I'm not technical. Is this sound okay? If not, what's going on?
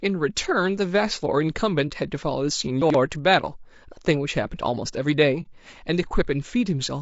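No. Throughout the clip there are signs of low-delay AAC compression, the kind of squeezing video-call apps likely used here. It slices the sound into very short pieces and has too little room to keep the detail, so the voice sounds rough and grainy, with a hiss between its tones and a thin, artificial-sounding top end.

There are two moments of AAC frame loss with muting, from 1.88 to 1.91 s and from 5.42 to 5.47 s. Each time, a short piece of sound, about 30 ms, never arrived, and the player filled the gap with silence. You hear a brief, soft-edged dropout.

From 2.82 to 2.94 s there are chunks out of order. A small piece of sound, about 43 ms long, came in late and was played two pieces after its proper place. Nothing is missing, but that instant sounds jumbled.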